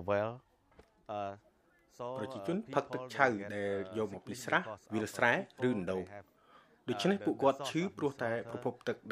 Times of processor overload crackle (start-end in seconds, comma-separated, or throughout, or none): none